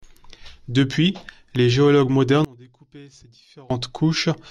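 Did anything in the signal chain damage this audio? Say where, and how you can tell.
Yes. From 2.45 s to 3.70 s the speech collapses to a faint residue about 25 dB below the surrounding level, then returns at full strength. This is the sound of one channel inverted: the centred speech is common to both channels, so when the pair is summed to mono the inverted copy cancels it, leaving only the small inter-channel difference. The cause is likely a polarity swap in the analogue wiring, such as reversed conductors on one leg of a balanced connection.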